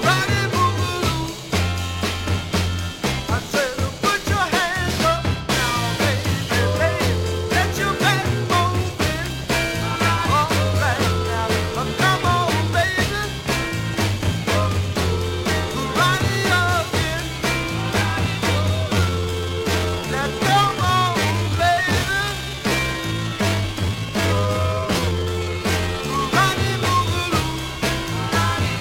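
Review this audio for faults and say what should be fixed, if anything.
From 18.89 s to 26.21 s the pace abruptly drops to about two-thirds speed while the pitch stays put, and the section drags. This is a time-stretched section. Software most likely lengthened this stretch to fill a slot, keeping the pitch constant by repeating short slices of audio. At 0.667x speed those repeated slices fill the extra time. To prevent it, fit timing by editing or re-recording rather than stretching the audio this far.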